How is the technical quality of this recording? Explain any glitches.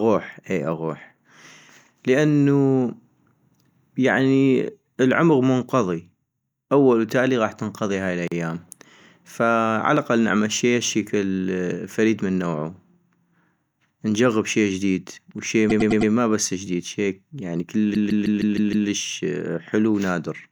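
Two stutters from repeated frames mar the recording. After "نجغب شي جديد وشي", from 15.69 to 16.11 s, a 104.5 ms block of compressed audio plays four extra times, adding 0.42 s. After "بس جديد شي يعني", from 17.93 to 18.88 s, a 156.7 ms block repeats six extra times, adding 0.94 s. The decoder replays the same chunk, producing a stammer. A waveform shows identical envelopes tiled side by side, and a spectrogram shows the same pattern copied.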